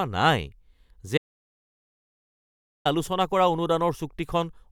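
At 1.18 s the speech cuts off abruptly. This is an audio dropout to silence. The sound returns just as suddenly at 2.85 s. The gap lasts about 1.68 s. It is dead silence, with no room tone or background underneath. Whatever was spoken in that stretch is simply gone. The likely cause is a lost input signal, while the recorder kept writing silence until the feed came back.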